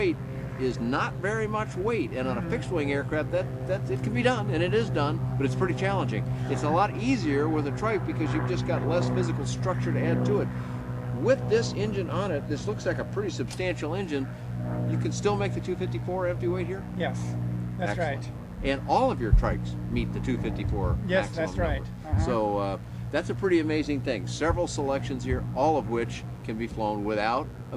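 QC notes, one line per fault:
Throughout: mains buzz, a steady raspy buzz sitting roughly 30 dB under the sound. Switching spikes on the 50 Hz supply enter twice per cycle, so the interference carries a dense stack of 50 Hz harmonics extending up to several kHz, which gives the edge.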